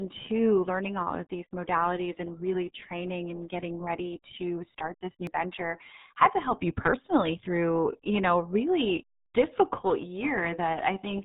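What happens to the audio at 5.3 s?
Right at 5.27 s, just after "ready to start this" and before "venture had to help", the speech jumps. There's no gap or silence; something like 70 ms of audio simply isn't there and the two edges butt straight together. That's most likely a dropped buffer from an overrun: the software didn't fetch its samples in time, the hardware wrote over them, and playback skipped ahead past the lost chunk.

You'll also hear the RealAudio 14.4 codec over that moment, as it runs through the whole clip. At 8 kbit/s with nothing above 4 kHz, the speech around the skip comes out muffled and gargly, with a heavily smeared, band-limited quality.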